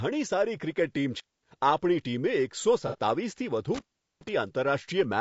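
Low-delay AAC compression runs throughout this speech: the voice is rough and grainy, with noise between the harmonics and a thin, synthetic top band. The likely cause is a low-delay codec whose short frames resolve pitch poorly, at a rate near 32 kbps.

Intermittent contact appears first from 1.16 to 1.46 s, when a loose connection opens for about 0.23 s. The sound cuts out with crackle at both edges and leaves faint hiss while the line is open.

AAC frame loss with concealment follows from 2.87 to 2.98 s, just after "ટીમે એકસો". About 60 ms of audio is missing, which fits two lost frames. The decoder patches the gap from the last good spectrum, so the passage sounds smeared and noisy.

Intermittent contact returns from 3.75 to 4.29 s. This time the connection stays open for about 0.39 s, and the same crackling dropout and hiss are heard.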